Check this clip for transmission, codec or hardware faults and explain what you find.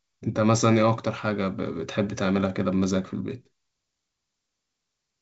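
Nothing stood out on listening to this speech clip, which comes across with the clear, wideband character of G.722 telephone coding.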